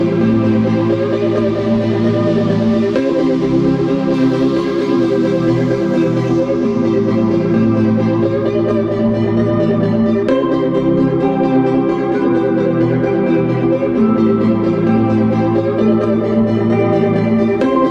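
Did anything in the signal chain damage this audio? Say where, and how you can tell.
Yes. Pre-emphasis was left on from 4.14 to 6.40 s, a fault at the de-emphasis step of the playback chain. For those two seconds the sound turns thin, bright and hissy, with the top octave about 8 dB hotter at 10 kHz than at 1 kHz, a tilt that matches the CD 50/15 µs curve. The treble boost applied before storage was never undone by the matching cut, so the highs stay exaggerated until the balance returns after 6.40 s.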